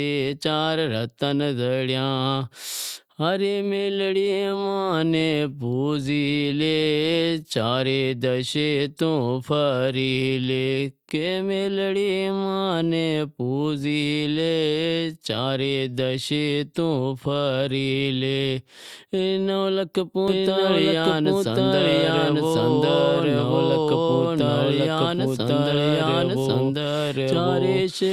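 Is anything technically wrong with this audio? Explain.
Yes. From 20.28 s to the end, a doubled audio track appears: a full-band copy at about equal level trails the speech by roughly a second, likely from a slower second capture path. It starts abruptly, without decay, and a spectrogram shows every pattern repeated a second later.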